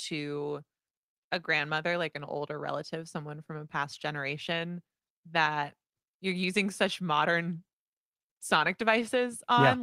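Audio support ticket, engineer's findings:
No audible faults found on the speech path; nothing to attribute to any component.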